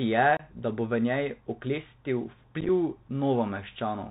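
The speech sounds dull and boxed-in, with nothing above 4 kHz, scratchy s sounds and a granular hiss underneath, the mark of the Bluetooth CVSD headset codec, which fits a 64 kbps link. Unconcealed Bluetooth headset packet loss cuts abrupt holes into the sound. The first, from 0.37 to 0.42 s just before "da bo v njej", drops about 26 ms. The second, from 2.61 to 2.70 s just after "bo v njej oklestil", is a rough chopped stretch of scattered gaps totalling about 38 ms across 83 ms. Each points to a handful of lost packets replaced by silence or an idle pattern.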